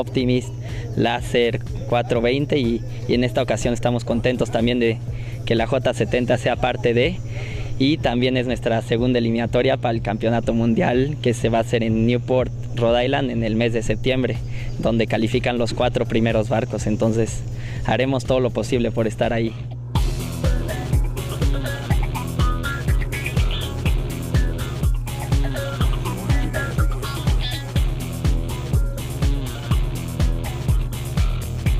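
Power-line energy is getting into the signal path, probably through a ground loop or a transformer close to the wiring, and it stays there from start to finish. The result is mains hum: a steady low tone at 60 Hz, with a few low harmonics above it, running under the whole clip. It sits only around 10 dB below the wanted sound, so the drone is prominent and easy to hear.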